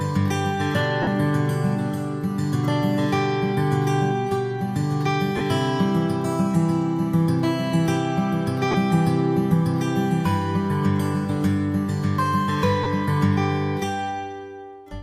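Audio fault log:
1.02–1.07, 5.37–5.41, 8.71–8.75 and 12.83–12.86 s, lost LE Audio frames: four short dropouts of about 45, 38, 30 and 30 ms, each fitting a handful of 7.5 ms frames going missing over the Bluetooth link. The LC3 decoder covers each hole by replaying the last good spectrum with scrambled phase and fading it down, so instead of a clean gap you hear a brief hissy smear where the tonal detail goes grainy before the real sound comes back.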